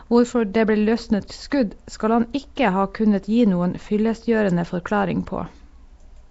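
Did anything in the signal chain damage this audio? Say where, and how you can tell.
Yes, at the codec stage, throughout. Speech has a rough hissy halo, underwater smearing, and nothing above 7.7 kHz. This is likely Nellymoser compression, with noise filling bands starved of bits.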